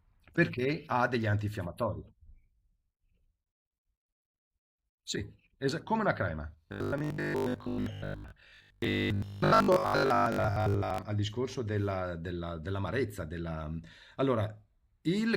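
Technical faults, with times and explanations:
6.68 to 11.02 s, robotic sound from repeated short buffers: new audio likely stopped arriving in time, so the playback side kept filling the gap by replaying its last short chunk, with most of the real audio over this stretch skipped. The repeats fall every 20 ms, which stamps a fixed 50 Hz buzz onto the speech. The speech turns hard and metallic, keeping only a rough trace of its original rhythm and shape until 11.02 s.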